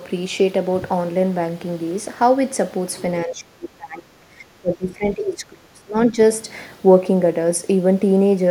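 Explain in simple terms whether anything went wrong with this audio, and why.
From 3.25 to 5.95 seconds the speech sinks sharply, turning faint and thin, and at its worst it nearly vanishes for a moment before returning to full strength. This is speech suppressed in double talk. It most likely happened because both ends of the call spoke at once, and the echo canceller, unable to tell this talker apart from the other side's voice coming out of the loudspeaker, turned everything down for almost three seconds.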